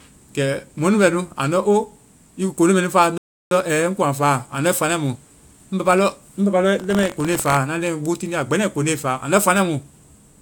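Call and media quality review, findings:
Rebuffering stall, 3.18 to 3.51 s, right after "nu faa": speech drops to silence for about 0.33 s, then resumes exactly where it stopped, with nothing missing and the timeline shifted later. Player buffer ran dry and waited for more downloaded audio.

Buffer tearing, 6.78 to 7.58 s: robotic rattle over the speech at a steady 46.9 Hz, which fits a 1024-sample buffer. Writer and reader of the ring buffer cross each period, splicing in a small slice of audio from one lap earlier with hard joins.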